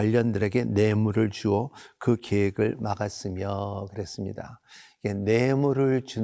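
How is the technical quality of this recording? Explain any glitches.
Nothing stood out as a technical problem on listening, and there are no glitches to explain in this recording.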